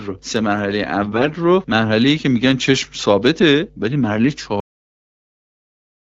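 From 1.02 to 1.34 s, AMR bit errors corrupt the wideband speech stream. Around a few percent of the less protected bits in each frame arrive flipped while the core checksum still passes, so pulse positions and fine gain and spectral values decode wrongly. The speech keeps roughly its pitch and loudness but turns hoarse, scratchy and gargly.

At 4.6 s a cut-off end occurs: the final buffers were never written or played out, so the speech halts partway through a sound. It falls straight to digital silence with no natural decay, and that silence runs to the end of the clip.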